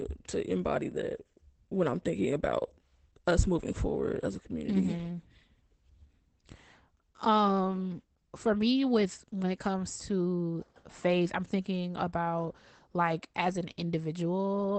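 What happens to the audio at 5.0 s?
At 5.0 s, as everywhere in this 15-second clip, the speech is going through Opus voice compression. The encoder is running its SILK linear-prediction coder in wideband mode and, judging by the damage, at a low bitrate around 12 kbps. It keeps nothing above 8.7 kHz and codes the excitation coarsely. The result is plainly audible: the speech sounds muffled and dulled at the top, with a hoarse, slightly robotic edge.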